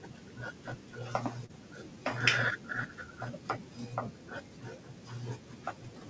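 At 1.46 to 1.52 s the speech has a short concealed packet loss: about 30 ms of audio reached the decoder too late, and the receiver covered it by extending the preceding sound for 32 ms before blending back into real signal. It is heard as a brief smear or wobble. Throughout the call, nothing appears above 8 kHz, which fits a G.722 wideband codec.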